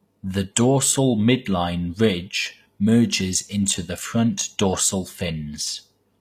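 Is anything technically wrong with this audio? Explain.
Yes. Throughout the speech, s sounds come across gritty and metallic, and the treble sounds synthetic, with the damage plainly audible. This is likely HE-AAC compression, which fits a low bitrate around 24 kbps: the upper band is rebuilt by copying lower bands upward, so its harmonics no longer line up.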